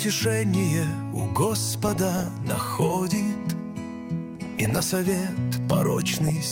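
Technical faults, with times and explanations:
1.88 to 2.31 s, 4.39 to 4.95 s and 6.08 to 6.30 s: DAB burbling over the sound. Weak reception is letting bit errors, somewhere under one percent, slip past error correction into the MP2 data. Corrupted samples put short noise blips into individual sub-bands, and corrupted scale factors throw sub-bands up or down in level for up to a frame. The bursts span 18, 25 and 10 frames.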